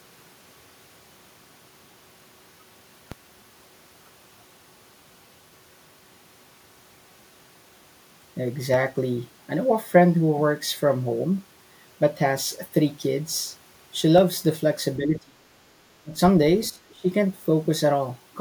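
The waveform's zero line jumps in a DC step at 3.12, 8.74 and 14.18 s, then decays back slowly. Each step is heard as a brief low thump while the speech carries on.

An echo canceller likely caught in double talk pulls the speech down at 14.97 to 15.46 s, 16.03 to 16.18 s and 16.70 to 17.08 s. These are dips of about 20 to 25 dB, so the voice briefly fades or drops out.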